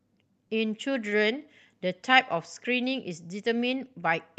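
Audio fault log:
1.09–1.19 s, short stall from a late packet: a packet arrived behind schedule and the jitter buffer ran dry, so the receiver filled the gap by stretching the sound it already had for about 24 ms and then resumed exactly where it left off. No speech is lost, but one sound is held slightly too long, with a faint buzz or dip, and everything after it lands about 24 ms later against the Opus call path's 8 kHz-limited audio.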